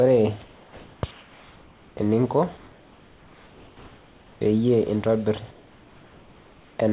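A speech recording over a narrowband call path with no content above 4 kHz, it has comfort noise in place of the background at 0.43–1.03, 1.11–1.97, 2.57–4.41 and 5.51–6.79 s. These pauses turn to steady, featureless hiss about 2–3 dB quieter, likely from discontinuous transmission.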